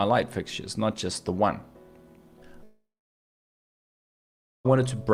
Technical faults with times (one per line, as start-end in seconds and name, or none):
2.63-4.67 long network dropout